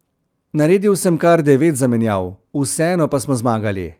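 Speech recording with no audible technical faults.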